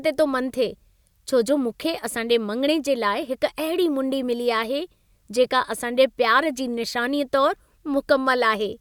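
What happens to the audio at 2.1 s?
Nothing goes wrong at 2.1 s; the speech carries on intact through that moment, with no dropout, click or distortion.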